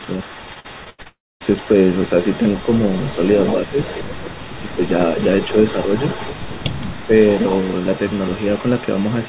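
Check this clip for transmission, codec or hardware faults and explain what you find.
Four kinds of fault are present, heard over a narrowband call path that cuts everything above 4 kHz, consistent with G.711.

Echo leak, 0 to 9.29 s: a faint copy of the sound trails about 0.17 s behind, roughly 20 dB down, likely loudspeaker pickup that the far-end echo canceller failed to remove.

Repeated packet loss (robotic sound), 0.54 to 1.07 s: five gaps, the longest 86 ms, are patched by stretching the last sound. About 37% of the span turns choppy, with pieces missing.

Long network dropout, 1.07 to 1.42 s: a fading buzz follows the last sound, then about 0.24 s of silence. This is likely a stretch where no packets arrived, so that audio is simply gone.

Speech suppressed in double talk, 3.67 to 4.33 s, 4.60 to 4.79 s and 7.06 to 7.11 s: the level dips by roughly 10 dB in pieces. The likely cause is the echo canceller turning down both sides while they talk at once.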